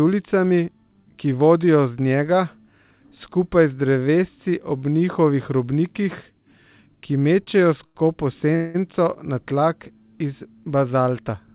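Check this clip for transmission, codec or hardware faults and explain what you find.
Three brief timing faults occur between 7.4 and 8.8 s in this narrowband speech, which has nothing above 4 kHz.

Short stall from a late packet at 7.44–7.48 s and 7.86–7.97 s: the jitter buffer emptied, so the last sound was stretched by about 21 ms and 88 ms, heard as a held, slightly buzzy moment. A spectrogram shows flat, smeared bands.

Call audio freeze at 8.55–8.76 s: held-up packets, likely, emptied the buffer, so a fading buzz fills about 194 ms without silence. The waveform shows repeated, decaying cycles.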